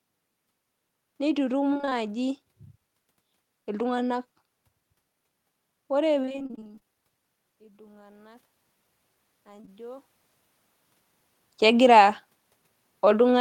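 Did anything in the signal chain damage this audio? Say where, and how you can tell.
Yes. Three kinds of damage are audible, all from the network and call-processing stages rather than the microphone, wiring or converter.

Repeated packet loss (robotic sound) hits two stretches. From 1.73 to 1.93 s there are five gaps, about 100 ms missing, none longer than 21 ms. From 6.22 to 6.96 s there are sixteen gaps, about 320 ms missing, the longest 30 ms. In both, roughly half the span is concealment. The decoder keeps extending the last pitch period, so the sound turns choppy. A spectrogram shows flat, smeared harmonic bands broken into stripes, and the waveform shows copied cycles.

Automatic gain rising follows, in call processing. The input level fell by about 24 dB, and the gain control climbed about 5 dB between 7.58 and 8.53 s, then about 3 dB between 9.45 and 10.13 s. Speech and room noise swell together, which rules out a talker simply moving closer. 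On the waveform the envelope ramps upward over most of a second. On the spectrogram the noise floor brightens across all bands at the same rate as the speech.

Short concealed packet loss sits inside the second gain rise, at 9.61 and 9.65 s. Two back-to-back 20 ms packets never arrived in time, about 40 ms in all. The receiver bridged them by continuing the preceding sound and cross-fading back, which is heard as a brief wobbly smear. A spectrogram shows a short blurred column.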